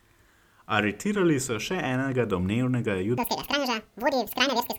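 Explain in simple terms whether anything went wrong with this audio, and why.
Something does go wrong near the end. From 3.18 s until the clip ends at 4.79 s, there is a section at the wrong speed: the speech plays twice as fast and roughly ten semitones higher, sounding hurried and squeaky. This is likely from the audio being played back against the wrong clock.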